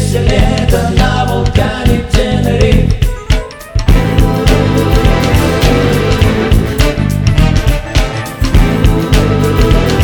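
No technical faults occur at any point in time in this audio.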